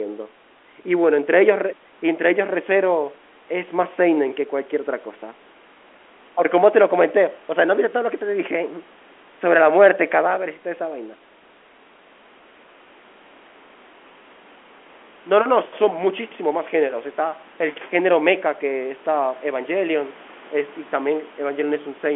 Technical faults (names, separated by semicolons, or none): none